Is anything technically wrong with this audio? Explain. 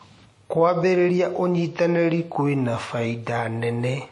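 Yes. Throughout the speech, there are signs of transcoding between lossy codecs. Nothing sounds above about 11.3 kHz. Artefacts from two different codecs stack up. This is likely a WMA encode re-encoded as MP3, which fits roughly 48 kbit/s for each.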